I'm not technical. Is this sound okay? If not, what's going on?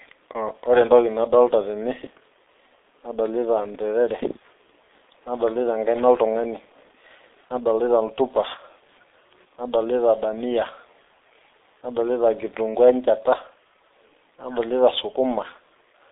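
No. Throughout the whole clip the speech sounds muffled and hoarse, like an old internet phone call, and consonants come out smeared. The cause is the G.723.1 codec, an early internet-telephony format that squeezes speech very hard. It keeps only a narrow phone-line band, with nothing above about 3.7 kHz, and rebuilds the voice from a rough model that updates slowly. Here that squeezing is heavy.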